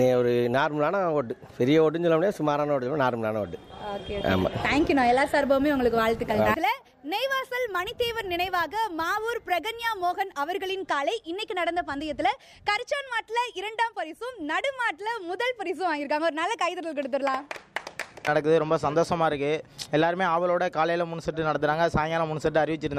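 From 5.42 s to 10.70 s there is crude rate conversion. The rate was raised without an interpolation filter, simply by repeating the nearest sample, and the pattern fits a 32 kHz to 48 kHz conversion. That stepping leaves an error sitting roughly 25 dB below the signal, forming shifted, inharmonic copies of the audio itself. It comes across as a gritty, inharmonic fizz that rides on the louder and brighter parts of the sound.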